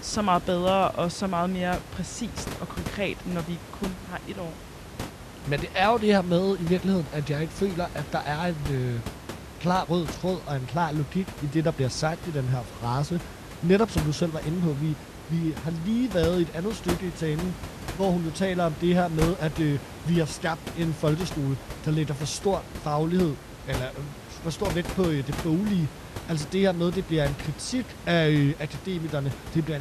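There are no technical faults to describe in this speech clip, so there is nothing to place in time order.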